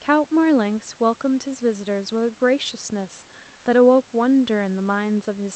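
From 3.55 to 3.65 s, for about 100 ms, the room background, sitting about 32 dB below the loudest speech, loses its natural detail and becomes a smooth, featureless hiss at the same level. This is comfort noise in place of the background, likely from Opus discontinuous transmission: the sender paused during a speech gap and the receiver filled it with synthetic noise. Unlike a noise gate or dropout, nothing goes quiet; only the background's texture flattens, within the call's 8 kHz band.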